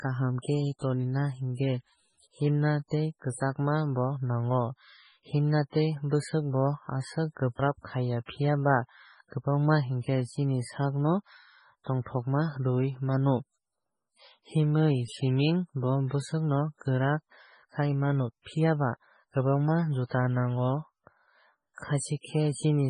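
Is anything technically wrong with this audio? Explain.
Yes. Throughout the speech there is heavy MP3 compression: nothing above 10.5 kHz and weak detail flickering frame to frame, likely from a very low bitrate near 16 kbps. It sounds watery and swirly, with smeared consonant attacks. A spectrogram shows a flat ceiling at 10.5 kHz and speckled, patchy gaps below it.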